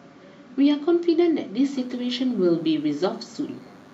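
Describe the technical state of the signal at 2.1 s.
At 2.1 s there's DECT cordless phone buzz, running from 1.73 s to the end: a nearby DECT phone or base station's 100 Hz radio bursts get rectified, leaving a thin, steady buzz well under the speech.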